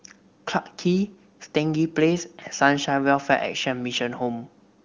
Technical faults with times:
none

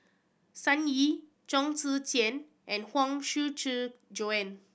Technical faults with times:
none

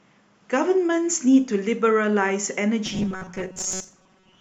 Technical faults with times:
2.86-4.41 robotic sound from repeated short buffers

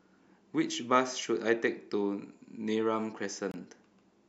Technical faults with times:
3.51-3.54 gap at a join of encoded pieces

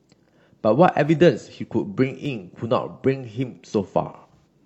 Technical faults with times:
1.09-4.59 clock drift buffer slips
4.06-4.47 AAC frame loss with concealment

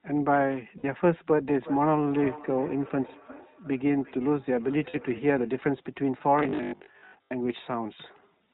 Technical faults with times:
0.00-8.53 iLBC codec
0.78-0.85 lost iLBC frames
1.53-5.61 feedback echo between two devices
4.90-4.97 lost iLBC frames

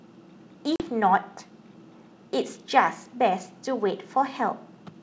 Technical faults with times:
0.76-0.82 packet loss on an ADPCM call

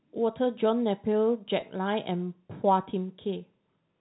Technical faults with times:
1.60-1.62 packet loss with pitch repetition

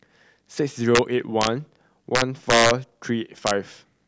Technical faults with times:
0.95-0.99 integer overflow
1.41-1.47 integer overflow
2.15-2.71 integer overflow
3.47-3.51 integer overflow

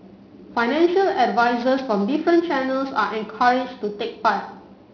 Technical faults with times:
0.00-4.94 aliasing

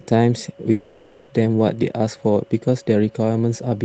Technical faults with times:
0.71-1.31 long network dropout

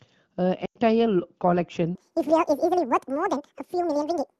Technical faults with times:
0.65-0.78 lost AMR speech frames
1.95-4.39 section at the wrong speed

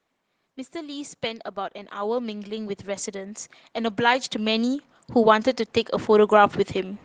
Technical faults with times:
0.72-5.55 automatic gain rising

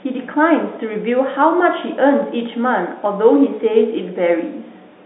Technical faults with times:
none

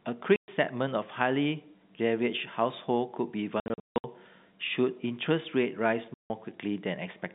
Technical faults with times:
0.36-0.48 packet loss filled with silence
3.60-4.04 packet loss filled with silence
6.14-6.30 packet loss filled with silence

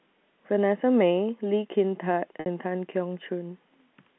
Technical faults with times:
2.40-2.46 packet loss with pitch repetition

